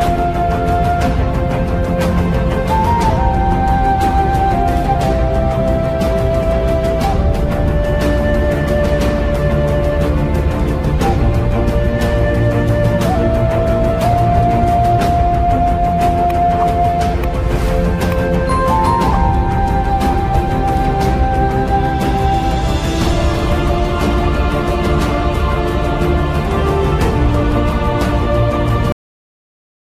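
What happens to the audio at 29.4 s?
At 29.4 s there's nothing but dead digital silence. It's a cut-off end: the sound stops abruptly at 28.92 s, mid-sound, with no decay, because the final buffers never got written out.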